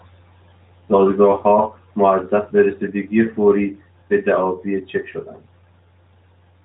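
Nothing stood out as a fault on listening, and the narrowband mobile coding of the speech sounds as expected for that path.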